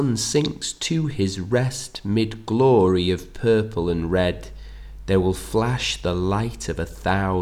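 From 3.78 s to the end at 7.41 s, mains hum appears: a steady 50 Hz tone with low harmonics, sitting about 15 dB below the signal. It points to a ground loop or nearby transformer coupling the power line into the signal path.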